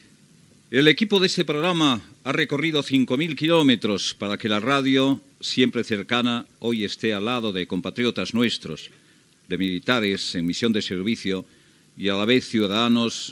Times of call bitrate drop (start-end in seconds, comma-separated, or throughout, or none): none